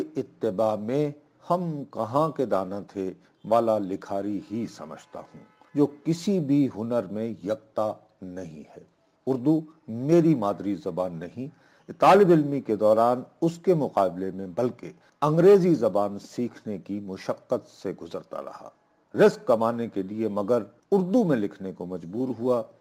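From start to finish the audio carries crude rate conversion. The sound appears to have been resampled by simply repeating the nearest sample, which fits a conversion from 44.1 kHz to 48 kHz, with no filtering. The periodic stutter creates error tones roughly 35 dB below the signal, heard as a gritty, inharmonic fizz riding on loud and bright passages. On a spectrogram this shows as faint spurious lines mirroring strong components, and the waveform shows small staircase steps.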